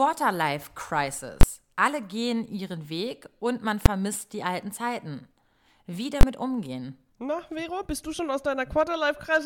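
At 1.41, 3.86 and 6.21 s, invalid numbers at full scale: infinite or invalid samples were pinned to maximum output for 20, 5 and 20 ms blocks, each heard as a single loud bang, the middle one between "und man" and "die alten".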